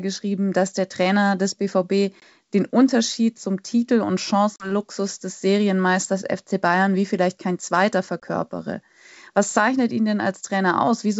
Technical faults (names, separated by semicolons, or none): packet loss on an ADPCM call